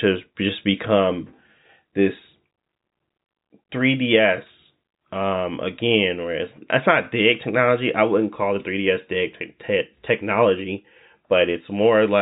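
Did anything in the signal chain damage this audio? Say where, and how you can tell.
No, the speech signal shows no damage from any stage in the chain, and its bandwidth stops at about 3.8 kHz, as expected from G.711 mu-law telephone coding on a 64 kbps line.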